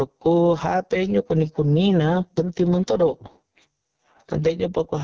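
From start to finish, the level sinks abruptly each time the speech gets loud, so the level seems to breathe with the talker, roughly 10 dB up and down. Loud and quiet syllables sit unnaturally close together and the speech sounds squashed. This is gain pumping, likely caused by a microphone gain set far too high, with a fast limiter or compressor clamping down on every strong sound and releasing in the gaps.

Running through the whole clip as well, the speech is rough and raspy, with a hissy, synthetic sheen over the top of the band. That is the AMR wideband (HD Voice) codec under heavy strain. The damage fits its lowest 6.6 kbit/s mode, where the pulse-driven model of the vocal tract has too few bits to rebuild the voice faithfully below 6.4 kHz, and the range above that is only shaped noise. The call's microphone processing limits the sound to below 8 kHz.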